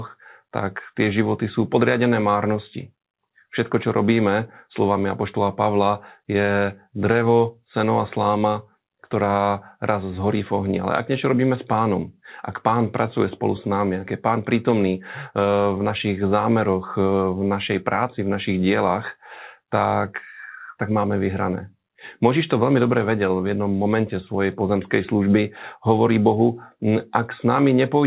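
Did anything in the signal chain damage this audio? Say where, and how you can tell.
No, nothing stood out on listening: the speech arrives through a call path whose band stops at 4 kHz, which fits G.711 mu-law at 64 kbps working as designed.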